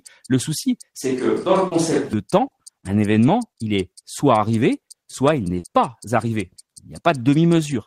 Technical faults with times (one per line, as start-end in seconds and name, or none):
1.02-2.13 switch to a distant microphone
1.67-1.74 short concealed packet loss
2.47-2.54 short concealed packet loss
5.59-5.66 short concealed packet loss